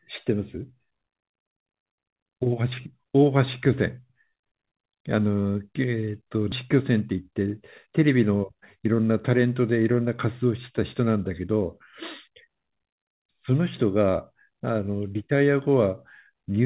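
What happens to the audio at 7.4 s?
A jitter buffer speed-up runs from 7.11 to 8.15 s. Short pitch-period pieces, about 70 ms in total, are cut. Speech runs 5% faster at the same pitch.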